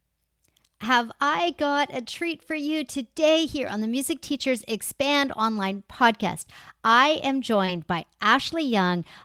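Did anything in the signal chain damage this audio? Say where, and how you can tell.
Yes, at the network and codec stage. Brief rough, noisier patches at 0.83, 3.67, 5.31 and 7.68 s are lost packets rebuilt from error correction. Each lasts about 20 ms, which fits a single lost packet replaced by the decoder from the lower-bitrate copy carried in the next one. There's no gap or smear, just coarser texture.

At 7.65 to 7.70 s there is also a short concealed packet loss. About 20 ms is missing and the decoder extends the preceding sound to bridge it before blending back. Unlike the rebuilt frames, this is guesswork rather than a degraded copy, so it sounds like a smear or wobble instead of grainy detail. It overlaps the final rebuilt frame.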